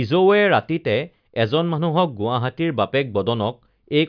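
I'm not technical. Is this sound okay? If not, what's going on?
Yes, this speech recording sounds fine. There is nothing wrong that a listener would need to worry about.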